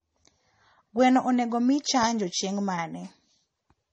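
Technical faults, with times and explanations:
Throughout, transcoding between lossy codecs: the speech carries two layers of compression damage at once, with smeared, swirly artefacts and a metallic, watery edge on top of each other, and nothing above 10 kHz. The likely cause is a low-rate MP3 encode, fitting around 40 kbit/s, later re-encoded as AAC-LC at about 32 kbit/s. The second encoder spends its scarce bits on the first one's artefacts and adds its own, while the lowest cut-off in the chain remains.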